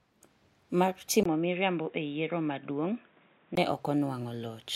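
From 1.23 s to 3.57 s the speech turns dull and boxy, with nothing above 3.8 kHz. It is a few decibels quieter and carries a new noise floor well below it, after a 20 ms silence at the switch. The input was likely switched to a poorer device with a narrower band.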